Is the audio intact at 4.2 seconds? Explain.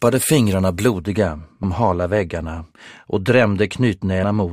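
No. At 4.22 s there's a compressed frames skipped fault. Several frames of the encoded stream never got played, so the audio jumps ahead by roughly 150 ms, which fits a 21.3 ms frame size.

That moment also sits inside a stretch of de-emphasis applied wrongly, running from 0.99 s to the end. A treble cut meant to undo pre-emphasis went onto audio that didn't need it, so the highs slope down smoothly to about 13 dB lower at 10 kHz, and everything sounds dull and muffled.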